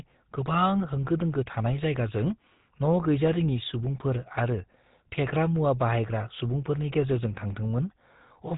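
From start to finish, the speech carries GSM full-rate codec damage, plainly audible: a buzzy, gravelly roughness where the excitation is rebuilt from regularly spaced pulses, with the bandwidth ending near 3.8 kHz. The bitrate sounds like the codec's 13 kbps, which fits its limited detail.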